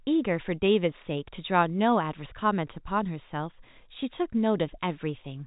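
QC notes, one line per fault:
No faults heard in this speech clip.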